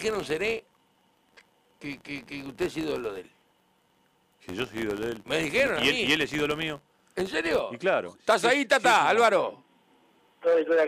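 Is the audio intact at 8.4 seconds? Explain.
Yes, at 8.4 seconds the audio plays through intact, with no dropout, click, distortion or other fault at that point.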